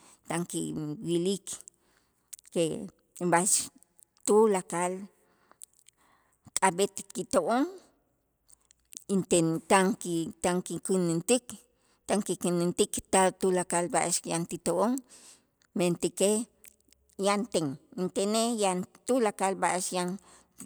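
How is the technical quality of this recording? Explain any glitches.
No glitches or technical faults can be heard anywhere.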